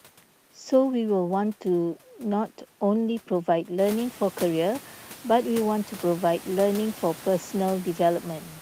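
No technical fault can be heard in the signal; the only change is the room's own background noise, which rises by about 16 dB around the 4-second mark and then sits about 21 dB below the speech.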